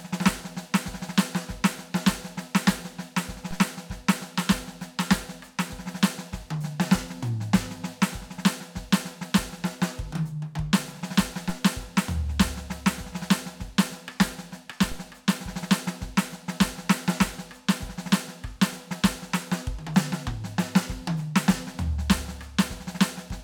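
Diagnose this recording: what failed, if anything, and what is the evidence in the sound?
Low thumps at 3.51 s and 14.92 s over unchanged music: converter DC steps, the zero line jumping, then decaying via a 5 Hz high-pass.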